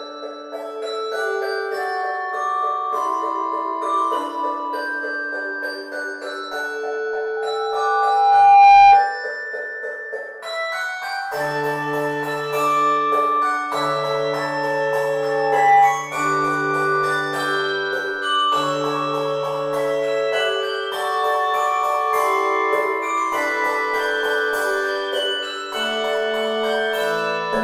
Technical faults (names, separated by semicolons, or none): loudspeaker feedback squeal